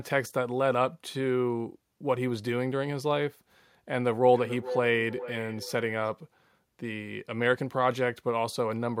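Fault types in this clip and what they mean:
Feedback echo between two devices: a second device in the same room on the same call plays back what the first microphone sent, and that microphone picks it up again, beyond the reach of an echo canceller that only removes its own device's output. From about 3.92 s to 6.14 s the speech returns as a delayed copy roughly every 0.4 s, at its loudest about 10 dB below the direct speech.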